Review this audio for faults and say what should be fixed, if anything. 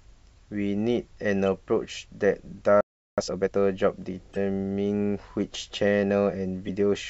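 Playback stall at 2.81 to 3.18 s. The speech cuts to silence for about 370 ms. The player likely ran out of data or had its thread blocked. A deeper playback buffer would prevent it.

Time-compressed catch-up at 3.18 to 3.54 s. The speech runs at twice normal speed, pitch unchanged. The player is cutting and cross-fading small pieces to clear its backlog. Letting the player resume without catching up would prevent it.

Damaged data in a compressed stream at 4.33 to 4.37 s and 6.65 to 6.69 s. Each is a brief glitch. The decoder misreads corrupted frames, loses sync and hunts for the next frame header. Checksums with retransmission on the stream would prevent it.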